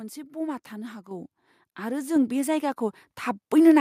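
At 1.11 s and again at 2.16 s the microphone volume stepped up: the call software judged the input too quiet and raised the device gain in a single jump, by about 5 dB and then about 4 dB. Voice and background noise both get abruptly louder together. On a waveform the envelope widens in one sharp step at each point, and a spectrogram brightens evenly across all frequencies there, with no fade.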